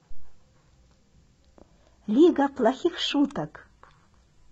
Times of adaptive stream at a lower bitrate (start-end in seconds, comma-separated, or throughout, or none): 2.02-4.51